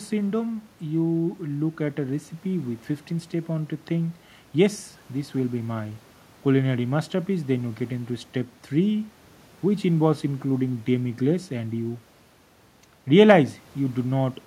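Nothing is technically wrong with this speech recording.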